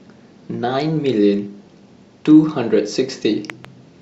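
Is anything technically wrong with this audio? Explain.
Yes, there's a loud pop near the end: two sharp hits in quick succession between 3.50 and 3.67 s, peaking roughly 10 dB above the speech, which keeps going underneath. It's likely a sudden voltage spike from a plug, switch, static or driver glitch getting added to the signal.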